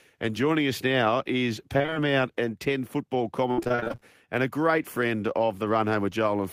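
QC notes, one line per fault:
1.77–1.97 s and 3.51–4.03 s, repeated packet loss (robotic sound): right after "joining us now is" and again just before "and a great friend", a burst of back-to-back dropouts gets patched by stretching the last bit of audio. About half of each stretch is filled in this way, with gaps up to 22 ms and 61 ms, so it comes out choppy with pieces missing.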